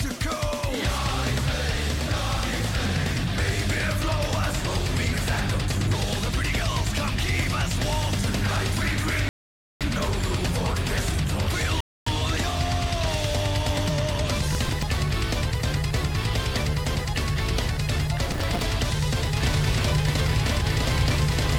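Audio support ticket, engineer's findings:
Rebuffering stall, 9.29 s. Sound drops to silence for about 0.52 s, then picks up exactly where it stopped, with nothing skipped. Player buffer ran dry, playback paused until more data arrived. Network or download path. Second rebuffering stall, 11.81 s. Shorter silent gap of about 0.26 s, same clean resume. Same mechanism: the buffer emptied again and time was added rather than audio lost.

Processor overload crackle, 14.52 to 14.83 s. Gritty, tearing crackle riding on the sound for about 0.3 s, then clearing. Audio thread missing a run of callback deadlines. Each missed block repeats stale audio with hard edges. Tiny grain fits a buffer of a few milliseconds. Repeat, 18.32 to 18.62 s. Same texture, same length, denser. Points to roughly twice as many missed buffers. Host CPU load.

Doubled audio track from 19.36 s to the end. A second full-band copy trails at around 0.7 s, about as loud as the original, with no decay or room colour. 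Abrupt onset, does not stop. Likely a second capture path or an edit layering two copies out of step, summed into the mix.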